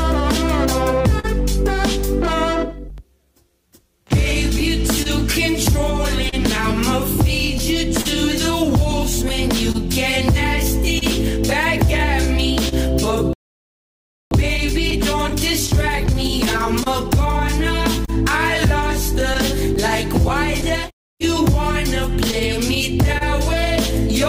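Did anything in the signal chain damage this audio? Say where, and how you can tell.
Yes. Network and receiver timing: the sender's clock runs about 2 percent slow, so the jitter buffer keeps draining and the receiver repeats short pieces at uneven intervals throughout. A waveform shows recurring small duplicated segments and discontinuities, and a spectrogram shows faint vertical seams, consistent with clock drift between sender and receiver.

Network: scattered short gaps run from 1.19 s to the end, where isolated lost or late packets were patched by extending the preceding sound. Each shows as a tick, smear or short dropout: a spectrogram has short stretches of frozen, smeared harmonics, and the waveform has small repeated cycles.

Playback: a playback stall from 13.33 s to 14.31 s leaves about 0.98 s of silence, with the sound stopping mid-flow and then resuming. The waveform is flat and the spectrogram blank across that span. 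The likely cause is the player running out of data or its thread being blocked.

Playback buffer management: from 14.31 s to 17.31 s comes time-compressed catch-up, playing about 1.1 times faster at normal pitch. The spectrogram shows harmonics at unchanged frequencies but events packed closer together, and the waveform shows small cross-fade joins.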